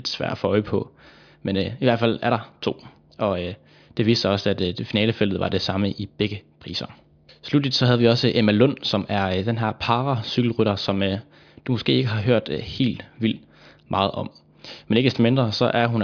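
Nothing goes wrong anywhere in this speech recording; there's simply no technical fault to point to at any moment.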